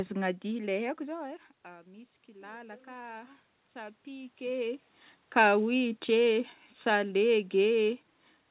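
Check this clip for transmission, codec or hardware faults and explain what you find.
There's one fault, an automatic gain rise. From 0.97 to 4.88 s, after the level drops about 17 dB as the talker backs off, AGC slowly adds about 6 dB, so voice and room noise swell together. The narrow 4 kHz top end fits a G.711 call path.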